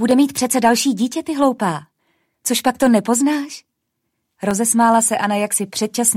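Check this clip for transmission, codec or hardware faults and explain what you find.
One hardware-related fault stands out: clock drift buffer slips, from 0.11 s to 5.97 s, repeating every 1.47 s, about five in all. This is likely two devices running on separate clocks that differ by a few hundred parts per million. The buffer between them drifts until a small block of samples is dropped or repeated, heard as a regular click.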